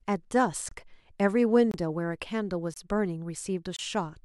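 Speech with a gap between chunks: 25 ms silent holes at 0.69–0.71, 1.71–1.74, 2.74–2.76 and 3.76–3.79 s, after each 1.0 s chunk, showing as hard-edged blank vertical stripes on a spectrogram.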